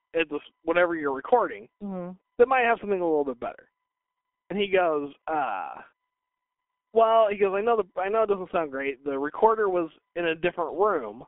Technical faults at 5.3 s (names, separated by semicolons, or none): G.723.1 codec